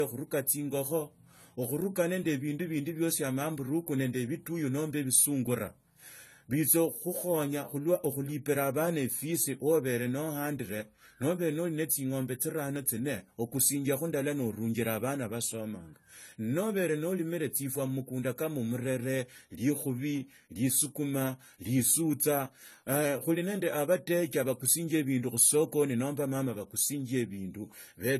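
Likely low-bitrate AAC compression, fitting roughly 32 kbps, strips everything above 14.1 kHz throughout, leaving this speech dull and smeared with a fizzy, warbling edge on sibilants. Audio is missing between chunks, likely because recording restarts every 5 s, dropping a few milliseconds and butting the sides together, heard as brief skips at 2.77, 7.77, 12.76, 17.75, 22.75 and 27.74 s.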